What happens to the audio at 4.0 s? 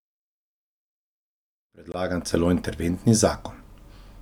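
At 4.0 s the speech continues intact, with no dropout, click, distortion or level disturbance.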